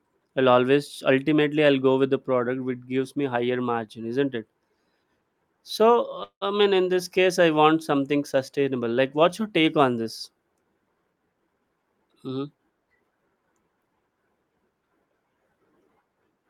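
At 6.23 s a call audio freeze, likely from held-up packets draining the jitter buffer, stretches the last sound into a fading buzz, then about 90 ms of silence, before "mean in" resumes, nothing lost. From 11.11 to 11.91 s a jitter buffer speed-up trims an overfull buffer, cutting about a fifth of a second so the speech rushes at 122% with unchanged pitch.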